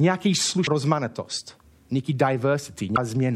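At 0.67 s a CD skip occurs: a knock or disc flaw throws the laser onto a different turn of the spiral, so the player mutes very briefly and resumes elsewhere in the speech. It sounds like a tick followed by an abrupt jump, and the waveform shows a near-silent notch with mismatched signal on either side.

From 2.92 to 2.97 s, damaged data in a compressed stream makes the decoder misread frames, lose sync and hunt for the next frame header. The result is a short chirp or squawk, which shows on a spectrogram as a smeared, broadband burst with a hard cut at each edge.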